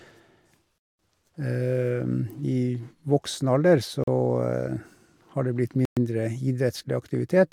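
Speech cuts to silence at 0.78 to 0.99 s, 4.04 to 4.08 s and 5.85 to 5.97 s. These are likely Bluetooth stalls. The buffer ran dry, then playback resumed.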